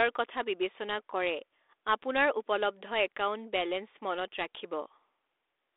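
No technical faults can be heard in this speech clip.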